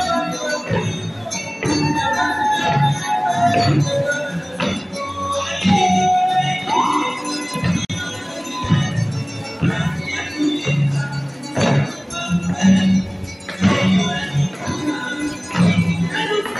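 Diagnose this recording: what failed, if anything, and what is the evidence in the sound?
A gap at a join of encoded pieces, a codec-stage fault: at 7.85 s the sound drops out for about 47 ms, then resumes at 7.90 s where it left off. Separately encoded segments were joined untrimmed, keeping encoder delay and final-frame padding. The waveform and spectrogram show a flat, silent column with smeared edges.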